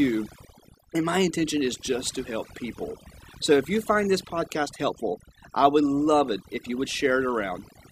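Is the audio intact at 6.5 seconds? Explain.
No, at 6.5 seconds you're hearing overdone noise removal, which runs through the whole clip. The noise reducer was pushed too hard, so it pulls individual frequency bands down whenever they sit near the noise floor. The background drops and breaks up into twinkly, warbling specks.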